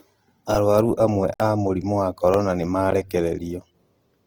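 Throughout the speech, the tone is rough and grainy rather than swirling, with the full bandwidth kept up to about 20.2 kHz. That points to heavy compression, likely Opus in its music mode at a low rate near 16 kbps, where starved bands are filled with noise instead of left empty.

At 0.55 s a repeated buffer gives a brief buzz. One tiny slice, which fits a buffer of about 1.3 ms, plays four extra times with hard joins. Because the slice repeats rather than going quiet, it buzzes instead of ticking, and a few milliseconds of new audio are lost.

From 1.34 to 1.40 s a block of digital silence cuts in. The output drops to silence for 60 ms with no fade, leaving a clear hole. Nothing repeats, which separates it from the stutter.

At 2.34 s a second repeated buffer plays the same short slice once more. This gives a single small click rather than a buzz, with roughly 1.5 ms of audio lost.

At 2.91 s a shorter block of digital silence, about 15 ms, is heard as a tick or dip. 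It is an abrupt drop to silence and back, not a repetition of the preceding sound.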